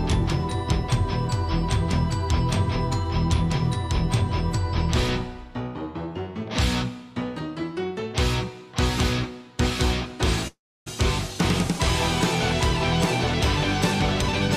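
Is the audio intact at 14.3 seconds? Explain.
No. At 14.3 seconds the sound is hurried: from 14.00 to 14.54 s it runs about 20 percent fast while keeping its pitch, so it rushes through without going higher. This is a jitter buffer speed-up. The receiver's buffer had built up more audio than its target, so it repeatedly trimmed short slices one or a few pitch periods long, cutting roughly a tenth of a second in total to bring the delay back down.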